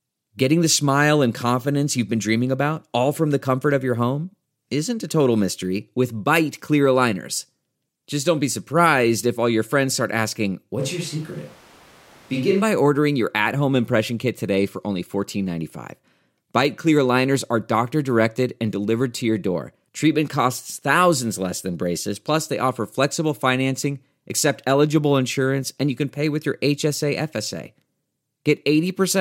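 At 10.80 s the speech abruptly turns roomy and hollow, with noticeably thinner bass, and stays that way until 12.61 s, when the close, full sound returns just as suddenly. The level barely changes, but background room noise rises to roughly 25 dB below the speech. The likely cause is a switch to a distant microphone, where the close microphone's signal dropped out and a more distant pickup, such as a camera microphone, covered those 1.8 seconds.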